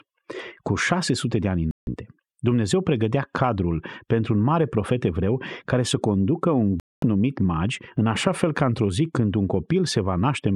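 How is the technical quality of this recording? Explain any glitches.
Two digital broadcast dropouts break up the speech. At 1.71 to 1.88 s, after "de ani", and at 6.80 to 7.03 s, between "care să conducă un" and "numit magi în așa", the receiver stopped getting valid frames and muted. The sound drops to silence for 160 and 224 ms, and that stretch of speech is simply gone.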